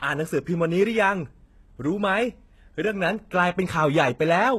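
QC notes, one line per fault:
Throughout, HE-AAC compression: s sounds turn gritty and lispy, the treble is bright but synthetic, and nothing reaches above 12.3 kHz. This is likely spectral band replication rebuilding the top from copied lower bands. The heavy damage fits roughly 16 kbps.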